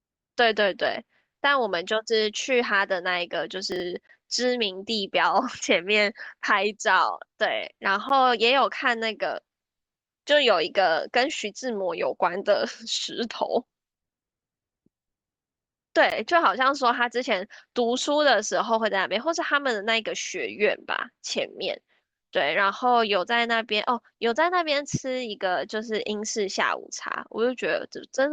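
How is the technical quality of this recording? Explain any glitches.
There are two kinds of glitch in this speech recording: one scrambled moment and three short dropouts.

First, at 3.72 to 3.80 s, there's a spot where chunks arrive out of order. A 40 ms block of audio arrived one chunk late, so it plays after the block that should have followed it. Nothing is actually missing, but the sequence is swapped and there are three hard joins. You hear it as a brief jumbled flicker.

Then there are gaps between stream segments at 4.07, 8.09 and 16.10 s. They last about 18, 11 and 16 ms. They fall on the boundaries of what look like 4 s segments, where the timestamps of neighbouring segments don't quite meet, and the player pads the difference with silence. No audio is lost. Each one is a tiny hard-edged hole in the sound, more of a tick or stutter than a real pause.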